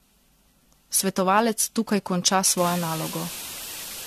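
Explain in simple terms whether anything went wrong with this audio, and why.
Yes, two things went wrong. The speech was most likely squeezed through the same lossy compression around seven times over, which is called generation loss. Each pass added fresh damage, so the whole clip sounds swirly, smeared and hollow, with nothing above 14 kHz.

Then, from 2.58 s to the end, right after "tukaj konča", the sound was stored with only 5 bits, far too few, plus deliberate noise to hide the rounding. This is low bit depth with dither, and it produces a loud, steady, even hiss.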